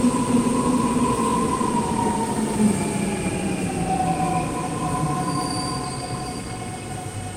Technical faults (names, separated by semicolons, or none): none